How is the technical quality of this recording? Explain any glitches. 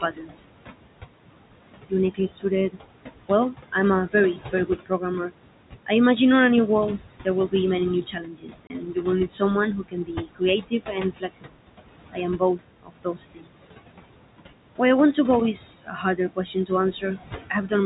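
The recording is hurt by heavy noise suppression, which also cuts speech, and by one brief dropout.

Noise suppressor artifacts run throughout. The background is pushed down by about 21 dB between phrases and rises under speech.

Speech cut by the noise suppressor happens five times. At 0.01 to 0.49 s, quiet sounds drop by about 16 dB. At 1.89 to 5.31 s, just before "I imagine a new", the drop reaches about 20 dB. At 6.98 to 11.59 s, just after "I imagine a new", it reaches about 22 dB, with around two seconds affected. At 12.13 to 13.61 s, the drop is about 22 dB. At 15.82 to 17.72 s, after "want to go is", it is about 20 dB. The suppressor mistakes soft consonants and endings for noise, so they sound swallowed.

Packet loss filled with silence occurs at 8.67 to 8.70 s. The 30 ms hole fits one lost packet replaced by silence, with hard edges.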